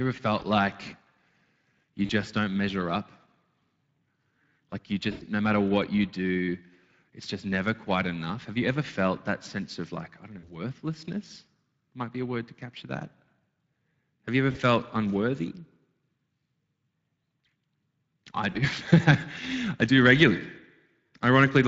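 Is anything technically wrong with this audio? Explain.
Yes, two things. The whole clip carries Speex codec damage: the speech sounds noisy and hoarse, because this CELP codec has too few bits to rebuild the excitation properly. The amount of grit points to a setting around 20 kbps.

On top of that there's VoIP packet loss concealed by the speech codec at 0.39–0.44, 2.05–2.11, 5.11–5.24, 10.39–10.49, 14.51–14.61 and 18.51–18.59 s. The decoder fills each gap by repeating its last pitch and filter while turning the gain down, so the speech smears into a fading buzz or coloured noise. Most gaps are 40 ms, the first is 20 ms, and the one at 5.1 s runs 100 ms. Each one leaves a short weak or distorted tail before the speech recovers.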